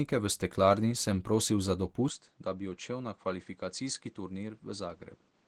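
From the start, the whole clip carries Opus compression, likely at a low rate. The speech sounds hoarse and muffled. The sound turns grainy and rough, not swirly. That character fits the codec's hybrid speech mode at around 16 kbps. Fullband content is still present, but thin high bands are filled with noise rather than true detail. The damage is plainly audible throughout.

At 2.08 s, just after "steklarni sem prosil za", the input switched to a poorer device, likely another microphone or a headset. There is no gap at the switch. The sound drops by roughly 10 dB and turns dull. Nothing remains above 8.7 kHz. A new, fairly low noise floor appears, far below the speech. This continues to the end.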